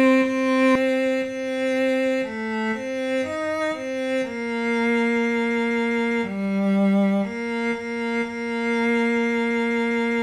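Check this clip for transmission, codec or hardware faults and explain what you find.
One fault is present. From 0.75 s to the end there is channel delay (comb filtering). One channel lags by roughly a millisecond and a half, and mono summing cuts evenly spaced notches from around 300 Hz upward. The result sounds hollow and phasey, and a spectrogram shows fixed horizontal gaps.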